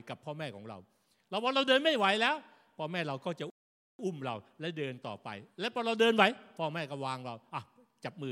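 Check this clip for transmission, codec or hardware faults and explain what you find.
One fault turns up, a playback stall. At 3.50 s the speech stops dead mid-flow and the output falls completely silent for about 490 ms, resuming at 3.99 s. The likely cause is the player running out of buffered data, or its audio thread being blocked, so nothing reached the output until it recovered.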